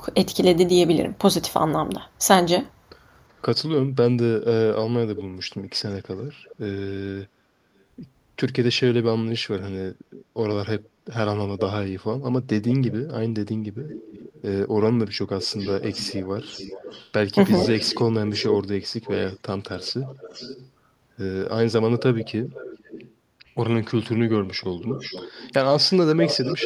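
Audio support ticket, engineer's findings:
Echo leak: delayed copy of the speech at 5.16–6.56, 10.84–10.88, 13.81–14.42, 15.4–17.1, 17.63–20.7, 21.98–23.12 and 24.8 s to end. Lag drifts from 389 to 448 ms, roughly 10–40 dB down. Likely far-end loudspeaker, echo canceller not converging.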